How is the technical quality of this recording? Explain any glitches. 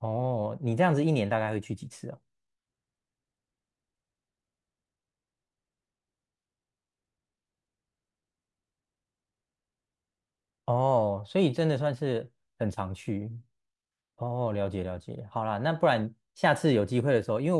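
Nothing goes wrong technically here; the speech recording runs along without any glitches to point out.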